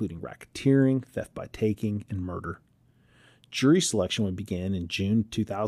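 No technical faults can be heard anywhere in the recording.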